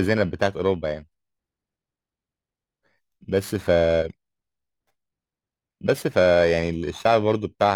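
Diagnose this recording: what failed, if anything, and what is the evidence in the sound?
Periodic clock jitter runs through the whole speech clip, a failure at the converter stage. Interference wobbles the sampling clock at around 3 kHz, adding sidebands at that spacing around every component. Higher frequencies suffer most, giving a rough, metallic edge that disappears in pauses.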